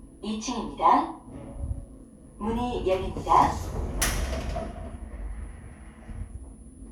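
Nothing goes wrong with this recording at any point; there's simply no technical fault to point to anywhere in the sound.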